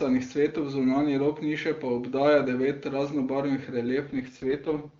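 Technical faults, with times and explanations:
4.07 s to the end, AMR rate drop: speech turns raspy and synthetic with no gap or band loss, fitting AMR-WB stepping down from 23.85 to 6.6 kbit/s.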